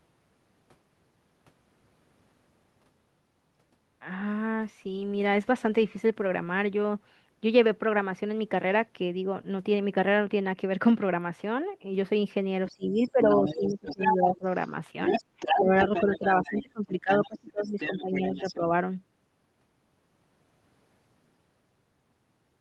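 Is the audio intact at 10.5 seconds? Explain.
Yes, the speech at 10.5 seconds is intact, with no dropout, glitch or other fault at that point.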